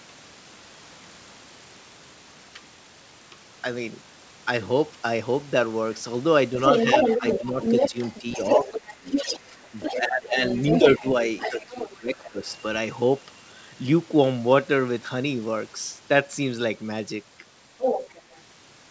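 From 6.61 to 10.0 s a second voice, roughly as loud as the talker, leaks through, likely the other side's voice escaping an incomplete echo canceller. Unlike crosstalk, it comes and goes with the far end's turns. It returns slightly quieter from 10.51 to 12.55 s and again, at about the talker's level, from 17.78 to 18.41 s.

During these overlaps the talker is speech suppressed in double talk: dips of around 10 to 20 dB at 6.86–9.07, 10.0–10.42, 10.82–11.15 and 11.49–12.46 s, likely from the canceller ducking both voices.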